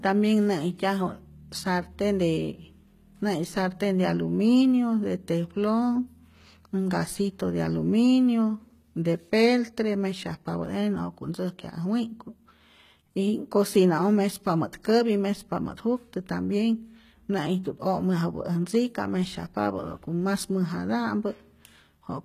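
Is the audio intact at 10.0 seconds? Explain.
No. At 10.0 seconds, as across the whole clip, the speech carries plainly audible damage, likely from HE-AAC compression at a very low bitrate. The treble is rebuilt from copied lower bands, so s sounds turn gritty and lispy. Nothing remains above 14.9 kHz.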